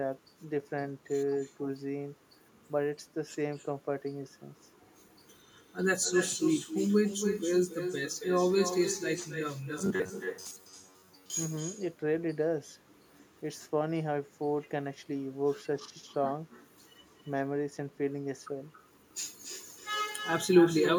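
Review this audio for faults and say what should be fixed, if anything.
Echo with no canceller runs from start to end. Every phrase comes back around 300 ms later as a quieter, thinner copy, about 8 dB below the direct speech. The far end is playing the call through a loudspeaker, and its microphone is sending that sound straight back across the network. Nothing on that side removes it before it returns. Fix this by enabling acoustic echo cancellation at the far end, or by having that listener use a headset.

Robotic sound from repeated short buffers appears from 9.79 to 11.3 s. For that stretch the speech collapses into a rigid, metallic buzz at about 94 Hz that only loosely follows the speech contour. The likely cause is audio arriving too rarely, so the receiver keeps looping the last fragment while most of the real audio is skipped. The 94 Hz pitch fits a fragment of roughly 10.7 ms repeated over and over. 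Prevent this by enlarging the jitter buffer and by using packet-loss concealment that fades out smoothly instead of repeating.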